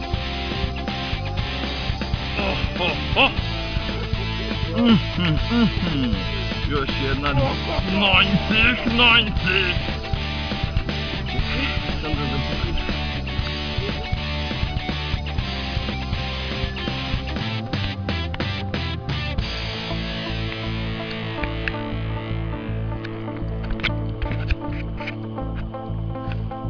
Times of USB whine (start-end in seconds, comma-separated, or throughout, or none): none